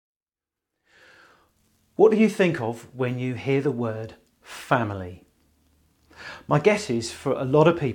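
A speech recording, and nothing is technically wrong with it.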